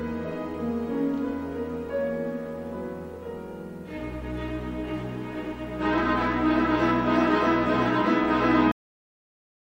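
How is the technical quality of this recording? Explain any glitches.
One glitch stands out: a cut-off end. At 8.72 s the sound stops abruptly mid-event and drops straight to silence with no natural decay, and that silence runs to the end at 9.75 s. The final buffers were never written or played out, so the tail was lost.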